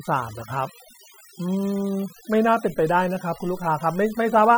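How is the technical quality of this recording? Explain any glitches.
The recording is marred by overdone noise removal, present from start to finish. A noise reduction stage was pushed too hard, cutting individual frequency bands down or out whenever their level sat close to its noise estimate, and the softer parts of the speech were removed along with the noise. The pauses drop to near silence dotted with twinkling specks. Unlike a noise gate, which mutes everything at once, this removes bands separately.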